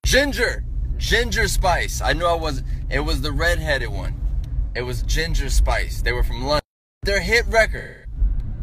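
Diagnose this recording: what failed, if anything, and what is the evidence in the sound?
AAC frame loss with concealment at 4.66–4.76 s and 7.78–8.18 s, a codec-stage failure. The decoder rebuilt missing audio from the last good spectrum. The 85 ms gap, fitting two lost frames, smears briefly. The 256 ms gap, fitting six, decays toward silence, then fades back.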